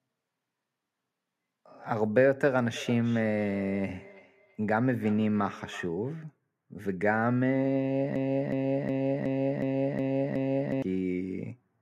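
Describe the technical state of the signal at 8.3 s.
At 8.3 s the signal is inside a broken-record loop running from 8.16 to 10.82 s. A 0.37 s fragment of speech repeats exactly, back to back, seven times. The likely cause is a stalled player or stream resending its last buffered piece, so the intended audio for that span is lost.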